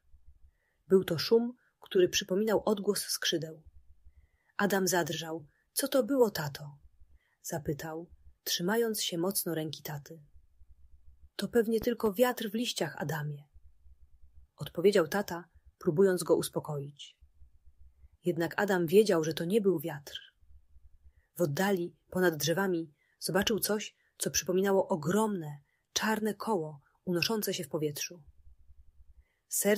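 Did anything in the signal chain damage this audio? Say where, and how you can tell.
Yes. A loud pop, actually two in quick succession, hits between 11.82 and 12.09 s, peaking a little above the surrounding level while the sound carries on underneath without a gap. That sets it apart from a dropout click. A voltage step in the analogue wiring, such as a plug or switch contact, is the likely cause.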